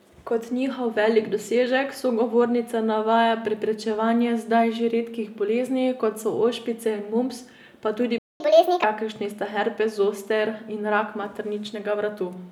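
A playback stall begins at 8.18 s, right after "ošpice in mumps pa", and lasts until 8.40 s. The speech cuts out in mid-flow and the output falls completely silent for about 0.22 s. The likely cause is that the player either ran short of buffered data or had its audio thread held up, so it had nothing to send to the output until it recovered.

A catch-up at higher speed follows directly, from 8.40 s to 8.84 s, ending just before "kakršni sta herpes zoster". The player works through the backlog from the gap by resampling it to run at 1.5 times normal speed. Because the speed is raised by resampling, the pitch rises along with it, by around seven semitones, and the speech sounds hurried and chipmunk-like. Once the lost time is regained, both speed and pitch return to normal.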